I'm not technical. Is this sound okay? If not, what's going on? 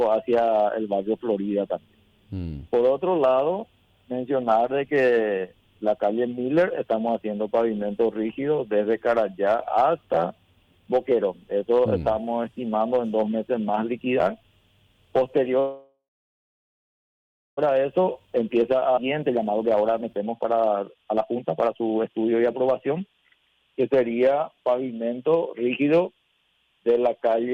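No. There are three separate problems, the last one falling inside the second.

Call audio freeze, from 15.59 to 17.59 s: the sound stalls for about 2 seconds, most likely because pieces of the call were held up on the way to you. The receiving end briefly stretches the last bit of sound into a fading hum, then goes quiet for about 1.5 seconds. When the delayed audio finally arrives, it picks up exactly where it stopped, so nothing is lost. It just arrives late.

Jitter buffer speed-up, from 17.70 to 23.22 s: after the freeze, the call is running behind. To catch up, the receiver snips out many tiny slivers of sound, each far too short to notice on its own. Together they remove about a second and a half, so this stretch plays at about 127% speed. The pitch stays the same, but the sound feels hurried.

Skip ahead, from 18.96 to 18.99 s: during the speed-up, a larger chunk of about half a second is also lost at once. 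Playback jumps straight past it with almost no gap, so the sound on either side is joined together and whatever was in that half second is simply missing.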